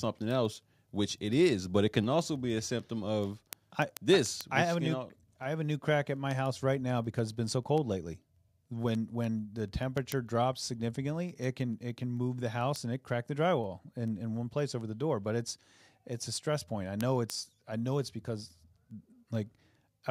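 From 0.16 s to 20.08 s there are word clock ticks, roughly every 0.15 s. A receiving device runs on its own clock, drifting around 150 ppm from the sender. Each slip drops or repeats one sample. The result is a steady stream of sharp clicks of uneven strength.

At 2.04 s the whole sound drops in level by about 1 dB. At 4.65 s it drops again, by about 2 dB. Speech and background fall together, abruptly. This is likely the microphone volume being stepped down by call software.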